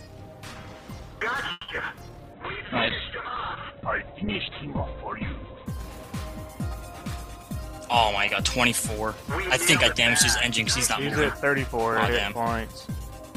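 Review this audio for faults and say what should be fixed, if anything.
A call audio freeze runs from 1.51 to 1.69 s. The last sound is stretched for 170 ms, likely because delayed packets emptied the jitter buffer. A deeper jitter buffer would prevent it.

Short concealed packet loss follows at 1.76 to 1.78 s. About 20 ms never arrived and was filled from the preceding sound. Forward error correction would help.

A call bitrate drop spans 2.34 to 5.73 s. The rate falls from 32 to 7 kbps and bandwidth from 20 kHz to 4 kHz, so the audio turns muffled. More stable network capacity would avoid it.

A jitter buffer speed-up occurs from 7.42 to 8.42 s and again from 11.35 to 12.89 s. Each time, roughly 70 ms of pitch periods are cut, so the audio runs at 105% speed with unchanged pitch and sounds hurried. Smoother packet delivery would prevent the buildup.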